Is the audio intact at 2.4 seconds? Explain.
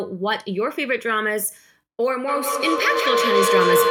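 No, a feedback howl runs from 2.28 s to the end: a mic-speaker loop builds into a tone around 500 Hz, with repeats roughly every 200 ms, peaking about 6 dB over the speech.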